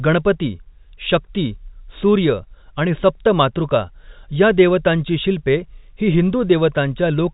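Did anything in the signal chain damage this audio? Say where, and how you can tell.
No, nothing in this speech stood out as damage on listening.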